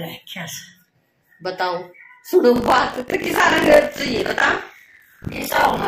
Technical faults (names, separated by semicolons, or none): buffer tearing